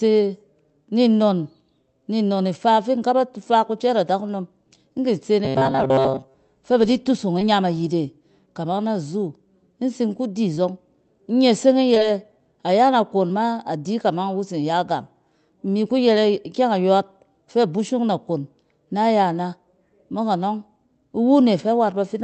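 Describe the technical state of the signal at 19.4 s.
At 19.4 s the speech is intact, with no dropout, glitch or distortion, only the ordinary coding character of the call path, whose high-frequency content stops near 8 kHz.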